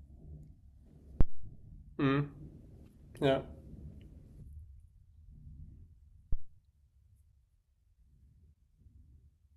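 A supply switched on a live input sends a voltage step through the coupling capacitors, giving a phantom power thump at 1.21 to 1.54 s, a deep thud peaking about -11 dBFS and dying within 76 ms, then a weaker one at 6.33 to 6.51 s, about -19 dBFS, fading in 42 ms.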